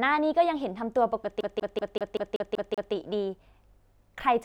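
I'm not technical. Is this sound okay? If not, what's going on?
No. From 1.41 to 2.94 s the speech stutters, repeating the same split-second chunk, about 0.19 s long, eight times with tiny gaps between. This is a CD stuck on one turn: a scratch keeps knocking the laser back to the same spot.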